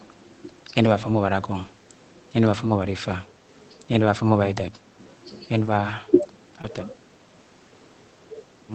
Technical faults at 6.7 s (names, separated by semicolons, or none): short concealed packet loss; lost packet rebuilt from error correction